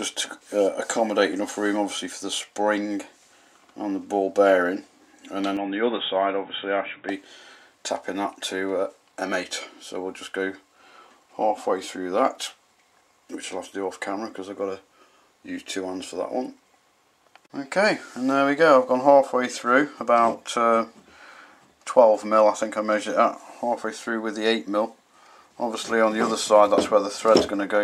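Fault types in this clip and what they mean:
Input switched to a poorer device: from 5.57 to 7.09 s the sound turns dull and boxy with nothing above 3.8 kHz, quieter by about 5 dB with new background noise, likely a change to another microphone.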